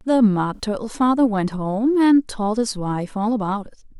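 At 0.54 to 0.61 s a corrupt frame was concealed: bits in two AAC frames were flipped, and the decoder covered the damage itself.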